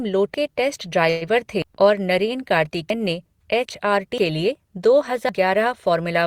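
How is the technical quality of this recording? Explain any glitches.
The speech has two kinds of playback glitch: one brief stall and four abrupt skips.

From 1.10 to 1.23 s, just after "के टेस्ट", there is a call audio freeze. The last sound is stretched into a fading buzz or hiss for about 115 ms, likely because late packets emptied the jitter buffer. Nothing is lost; the speech resumes where it stopped, simply delayed.

At 1.62, 2.90 (just before "ने एच आर"), 4.18 (just after "ने एच आर") and 5.29 s, a dropped buffer (overrun) produces a sudden jump in the speech. Roughly 300 ms vanishes at the first point and about 150 ms at each of the others, likely because samples were overwritten before being read.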